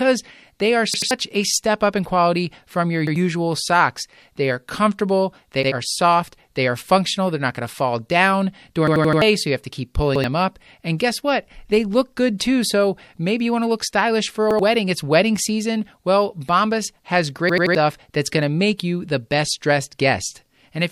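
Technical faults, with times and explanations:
0.94–1.11 s, 3.07–3.16 s, 5.63–5.72 s, 8.88–9.22 s, 10.16–10.24 s, 14.51–14.59 s, 17.49–17.75 s: repeated buffer. Fresh audio reached the output late, so the last 85 ms block, which fits a 4096-sample buffer, played again one to four extra times. Each event is a hard-edged stutter, and roughly 100 to 300 ms of audio is lost. On a waveform the identical segments sit back to back, with abrupt steps at each join. A spectrogram shows copied patches with sharp vertical edges.
10.98 s, 12.38 s, 18.78 s: pre-echo. Each sharp attack is preceded by a hiss lasting 16 to 19 ms, about 12 to 15 dB above the surrounding noise, and the onset sounds softened. The codec works in 36 ms blocks and never switches to shorter ones, so noise sized for the loud attack spreads into the quiet moment before it. A spectrogram shows a faint broadband smear just ahead of each onset. 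On a waveform, low fuzz rises before the transient.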